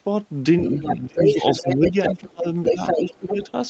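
A short speech recording with a second voice running underneath the talker for much of its length, heard at 0.63 to 1.01 s (a little quieter than the main voice) and again from 1.18 to 2.12 s and 2.63 to 3.51 s (about as loud as the main voice). This is most likely the other side's voice leaking through: the far end played over a loudspeaker and was not fully removed by the echo canceller. On a spectrogram it shows as a second, independent set of harmonic traces overlapping the talker's, all topping out near 8 kHz like the rest of the band-limited call audio. Overlapping those stretches, the talker's own level repeatedly sinks: from 1.03 to 1.4 s by as much as around 30 dB, from 1.62 to 2.47 s by roughly 15 dB, and more shallowly at 2.71 to 2.81 s and 2.97 to 3.4 s. This is likely speech suppressed in double talk, where the canceller, unable to separate the two voices, turned everything down. 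The waveform shows the envelope pinched inward during those spans, and the spectrogram shows fading or gapped energy.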